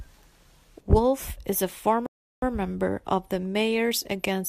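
A rebuffering stall runs from 2.06 to 2.42 s, just after "is a": playback exhausted its downloaded audio and paused until more data arrived. The speech drops to silence for about 0.36 s, then resumes with "member of the", losing nothing but adding time.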